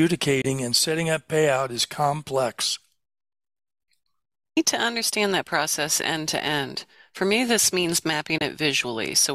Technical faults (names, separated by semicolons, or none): Bluetooth dropout